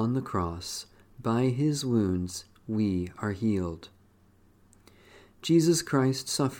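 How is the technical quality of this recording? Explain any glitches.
No glitches or technical faults can be heard anywhere in the recording; the signal stays steady and intact throughout.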